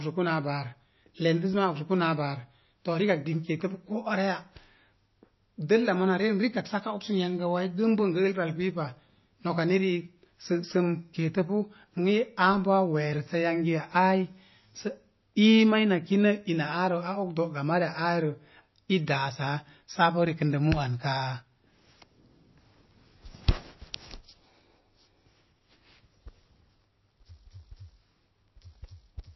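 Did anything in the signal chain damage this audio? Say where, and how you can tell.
Yes. MP3 compression throughout, at the codec stage: nothing survives above 5.8 kHz, and the speech has a plainly audible watery swirl with smeared consonant attacks. The likely cause is an encoder starved of bits, consistent with a bitrate near 25 kbps, dropping treble and weak frequency lines frame by frame.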